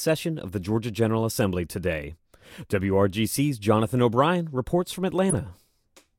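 Speech with a corrupt frame decoded from 5.30 to 5.35 s: damaged bits in a couple of compressed frames were played anyway, putting error energy, peaking around -10 dBFS, at wrong frequencies. Unlike a concealed dropout, it adds foreign sound rather than smoothing over a gap.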